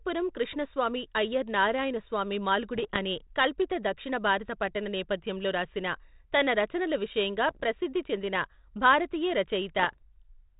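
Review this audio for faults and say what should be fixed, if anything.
Bit errors on an ADPCM link appear three times. The first is from 2.73 to 2.99 s, after "కృష్ణస్వామి అయ్యర్ నారాయణస్వామి". The second is from 7.48 to 7.64 s, between "రాసిన తన రచనల విషయంగా" and "ప్రసిద్ధి చెందిన భారతీయ". The third is from 9.79 to 9.97 s, after "విషయంగా ప్రసిద్ధి చెందిన భారతీయ". Each is a cluster of pops and rough bursts with jumpy level. A flipped bit throws off the decoder's step size and prediction. The damage then lingers for a few milliseconds. The error rate is well under one percent. To prevent this, add error protection or error concealment on the radio link.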